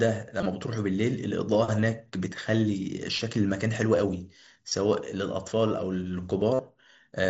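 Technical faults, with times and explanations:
0.39–0.46 s, 1.81–1.83 s, 4.69–4.72 s and 6.54–6.59 s, concealed Bluetooth headset packet loss: brief dropouts on the mSBC link, about 15 to 50 ms each, patched by repeating the best-matching recent waveform, giving a short buzzy hold and a slight warble where real audio returns.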